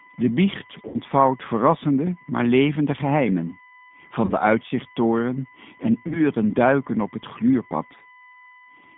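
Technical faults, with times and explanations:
Throughout: USB whine. A steady, fixed-pitch tone sits under the speech, built on 1 kHz with its strongest component at 2 kHz, roughly 30 dB below the speech. It comes from the USB bus drawing current in 1 ms frames, and that ripple leaks into the audio through the power or ground. On a spectrogram it shows as thin, unbroken horizontal lines at 1 kHz and 2 kHz that persist through pauses.
Throughout: G.729 codec. The speech is confined to roughly 150 Hz to 3.6 kHz, and its texture is plainly rough and slightly synthetic, which fits an 8 kbit/s G.729A stream. This codec rebuilds each 10 ms frame from a vocal tract filter, a pitch predictor and a few pulses, so fine detail is lost. A spectrogram shows a hard ceiling below 4 kHz with blurred, smeared harmonics rather than crisp formant structure.
0.88–0.98 s, 4.25–4.32 s and 6.07–6.20 s: VoIP packet loss concealed by the speech codec. 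Audio went missing, about 60 ms in the first gap, which fits two lost packets, and 30 ms in each of the others. The first gap falls just before "verrassende maar levende geheimen", the second just before "uitzichttoren en", and the third between "uitzichttoren en" and "duiken op het". The decoder repeated its last pitch and filter at falling gain, giving a buzzy, stretched sound that fades before the speech recovers. On a spectrogram these appear as flat, repeated harmonic bands. In the waveform they show as decaying, overly regular cycles.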